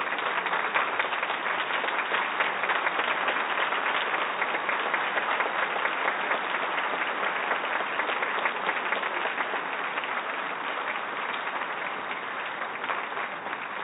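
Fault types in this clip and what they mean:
Nothing here needs flagging; it's an easy, uneventful listen with no technical faults to pick out.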